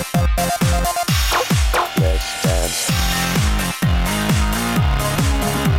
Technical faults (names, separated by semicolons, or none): compressed frames skipped